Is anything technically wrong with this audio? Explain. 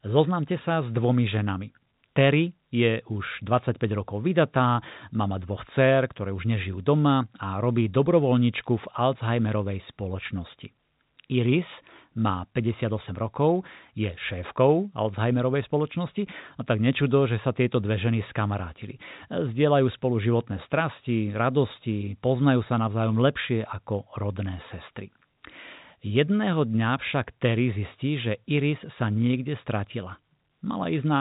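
No, this is speech carried over G.711 telephone coding, which fits A-law at 64 kbps, with nothing above about 3.8 kHz, and no fault can be heard.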